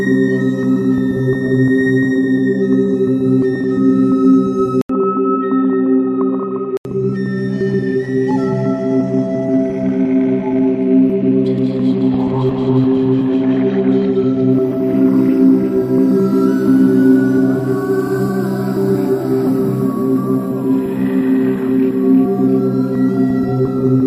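At 4.81 s the sound cuts out for 80 ms, then returns dull and boxy. Nothing above 3.8 kHz remains. It is slightly quieter, over faint new noise. The likely cause is an input switched to a poorer device. Full sound returns at 6.85 s.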